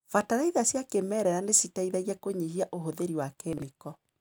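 A brief jumbled stutter in the speech runs from 3.53 to 3.62 s, just after "kĩmerera nĩciteithagia kũnyihia ũhũthĩri". This is chunks out of order: one 46 ms block arrived a chunk late and played after its successor, leaving hard joins.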